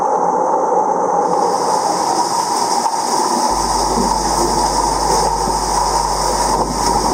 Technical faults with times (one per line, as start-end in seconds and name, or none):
3.48-7.14 mains hum